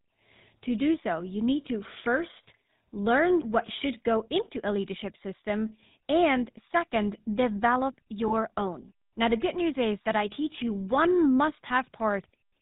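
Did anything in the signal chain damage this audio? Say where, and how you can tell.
Yes. The codec stage did most of it: the whole clip has the buzzy, gravelly roughness of the GSM full-rate codec, which fits 13 kbps. It rebuilds the voice from a vocal-tract model fed by sparse regular pulses, and there's nothing above 4 kHz.

There are also lost GSM frames from the network, at 8.28 s right after "system and second develop" and at 11.68 s after "I teach you one". Each is a single dropped 20 ms frame, patched by repeating the previous one, so you hear a brief metallic ring.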